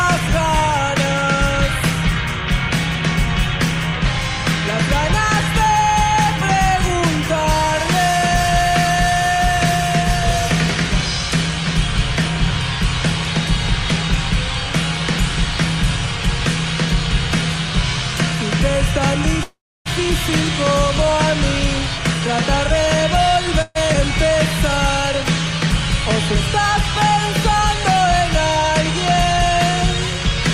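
At 19.43 to 19.87 s there's a call audio freeze: the sound stalls into a short fading tail, then about 0.3 s of silence, likely because packets got held up and the jitter buffer ran dry. Playback resumes where it left off, and nothing is lost. A second, briefer one hits at 23.62 to 23.77 s. Right after, at 23.93 to 23.96 s, playback skips ahead, jumping forward with barely a seam and dropping roughly 0.4 s of audio.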